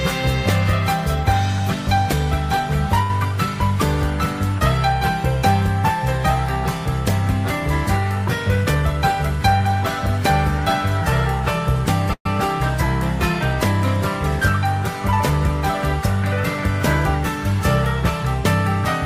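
At 3.02 s there is a short stall from a late packet, lasting until 3.10 s. A packet missed its playout time and the jitter buffer ran dry, so the receiver extended the last stretch of audio by 71 ms before resuming exactly where it had stopped. Nothing is lost, but that sound is held noticeably long with a faint buzzy quality, and everything after it plays 71 ms later than before.

From 8.56 s to 8.94 s the jitter buffer speed-up is audible. Having built up more audio than its target, the buffer trimmed short pitch-period-sized pieces in quick succession to reduce latency. Playback runs at 113% of normal rate over that span, shedding about 70 ms in total. Pitch stays put, but the passage sounds rushed and its timing tightens unnaturally.

At 12.13 s a call audio freeze begins, ending at 12.26 s. The last sound is carried forward as a buzzy continuation that decays, then drops to silence for 70 ms, with 125 ms filled in all. 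When audio returns it picks up from the point where it stopped, so no content is missing. The added gap shifts the remainder 125 ms later. This is likely caused by packets held up in transit emptying the jitter buffer.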